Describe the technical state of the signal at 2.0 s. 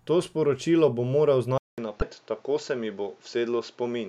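At 2.0 s the speech is in a short burst of damaged data in a compressed stream, from 1.99 to 2.02 s. The decoder misreads corrupted frames, loses sync and jumps to the next valid header, producing a brief chirp or blip. On a waveform it shows as a sharp glitch, and on a spectrogram as a thin vertical smear.

The moment also falls inside a longer stretch from 1.58 s to the end, after "sporočilo bom moral", where the input likely switched to a poorer device. A silence of about 200 ms marks the switch, and afterwards the sound is duller, with nothing above 7.6 kHz. A spectrogram shows a flat ceiling there and a faint new noise floor roughly 35 dB down, with no clear level jump.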